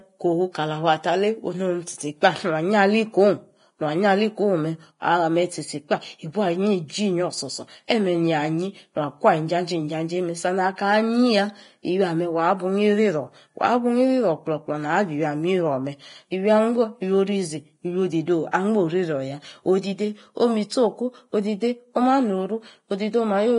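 Throughout, heavy low-bitrate coding, likely Vorbis compression, removes everything above 10.6 kHz and coarsely quantises the treble, leaving the speech hissy, grainy and dull-edged. Pre-echo occurs at 7.88 to 7.90 s, 18.51 s and 20.70 s. Block-spread quantisation noise leaks ahead of sharp attacks, adding a brief hiss of 16 to 26 ms before them and softening each onset.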